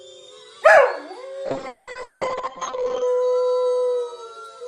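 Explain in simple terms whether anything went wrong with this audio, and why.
From 1.48 s to 3.13 s the sound suddenly turns rough and muffled, as if heard through a wall with a watery, smeared texture, then snaps back to full clarity. This is a call bitrate drop: the connection briefly judged it had far less room, so the audio was squeezed into a tiny fraction of its normal data. Detail was coded crudely, and everything above roughly 8 kHz was cut away, which removes the crispness until the data rate recovers.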